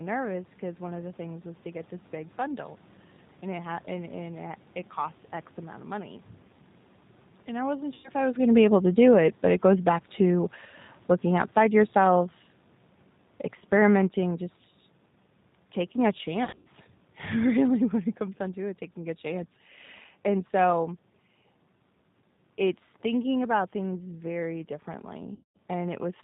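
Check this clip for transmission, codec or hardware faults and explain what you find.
Three kinds of fault are present: low-bitrate codec coding throughout, three bursts of concealed packet loss, and a gradual automatic gain drop.

G.729 codec, throughout the clip: the speech is rebuilt at 8 kbit/s from a vocal tract filter, a pitch predictor and a few pulses per frame, with nothing above 4 kHz. The damage is plainly audible as a band-limited, slightly rough, synthetic quality.

VoIP packet loss concealed by the speech codec, at 7.94–8.10 s, 16.45–16.67 s and 25.35–25.57 s: the decoder bridged the missing audio by extrapolating its last pitch and filter state while lowering the gain. About 100 ms went missing in the first gap. In the second, about 140 ms was scattered over 200 ms, with the longest run 80 ms. About 200 ms went missing in the third. Each gap sounds like stretched speech turning into a buzzy tone or coloured noise that fades, and the speech stays weak or distorted briefly after it.

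Automatic gain falling, from 8.42 s to 17.97 s: the gain control judged the input too loud, or its background noise too strong, and eased its gain down by about 10 dB. The speech and its background sink together over those nine and a half seconds. This is separate from the talker moving around 8 s and from the room noise, which belong to the recording.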